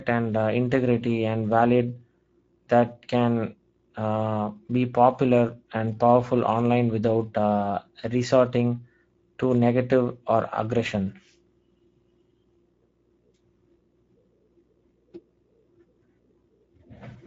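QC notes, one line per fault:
throughout: Speex codec damage, plainly audible across the speech. The low-bitrate CELP coding leaves little detail for the excitation, so voices sound noisy and hoarse. Nothing is present above 7.7 kHz. The sound fits Speex wideband at roughly 17 kbps.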